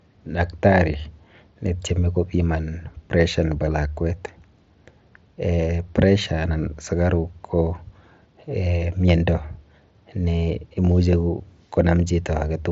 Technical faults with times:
none

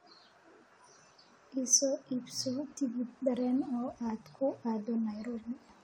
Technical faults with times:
none

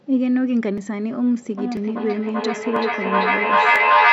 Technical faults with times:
0.78 audio missing between chunks
1.57-4.12 feedback echo between two devices
1.77 audio missing between chunks
2.76 audio missing between chunks
3.76 audio missing between chunks

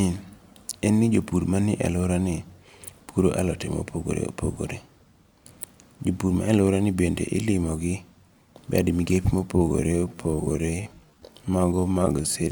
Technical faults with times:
9.52-12.52 time-stretched section

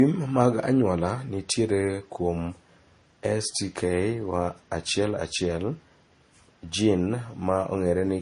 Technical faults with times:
0.00-8.21 transcoding between lossy codecs

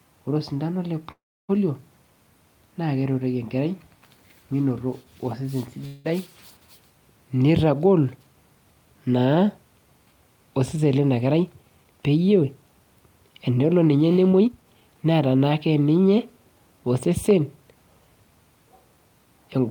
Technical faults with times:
1.11-1.51 call audio freeze
5.87-6.06 call audio freeze
11.26-12.63 jitter buffer speed-up
14.39-15.69 jitter buffer speed-up

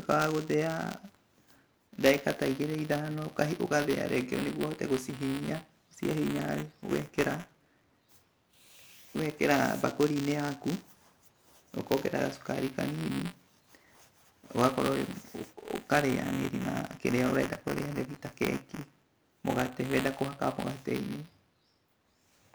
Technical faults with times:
0.00-22.54 buffer tearing

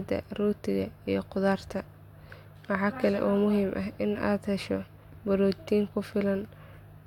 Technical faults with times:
none

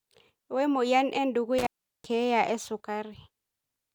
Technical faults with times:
1.58-2.06 intermittent contact

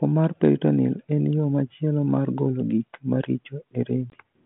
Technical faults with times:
4.10-4.14 packet loss on an ADPCM call

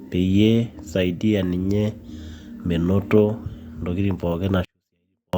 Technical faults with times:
4.65-5.33 24-bit alignment error (too quiet)

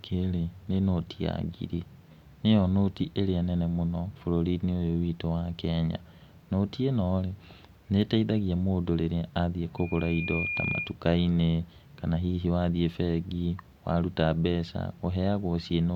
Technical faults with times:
9.77-10.95 loudspeaker feedback squeal

